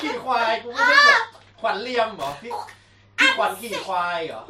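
It's a speech recording, and at 2.19 s there's a short burst of loose connector crackle running to about 2.35 s, so roughly 0.16 s of irregular scratchy noise. That's the sound of a worn or dirty contact somewhere in the chain shifting and making and breaking over and over. Each break chops the signal, and any DC sitting on the line turns those interruptions into little pops, which gives the burst its uneven texture.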